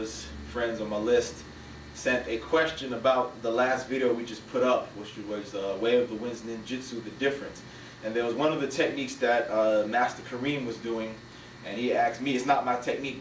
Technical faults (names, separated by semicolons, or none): none